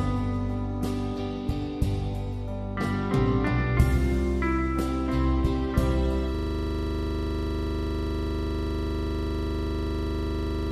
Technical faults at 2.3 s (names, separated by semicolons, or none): none